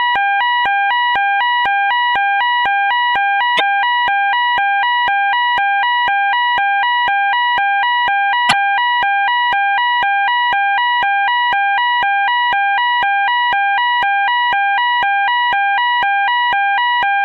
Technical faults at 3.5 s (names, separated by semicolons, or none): damaged data in a compressed stream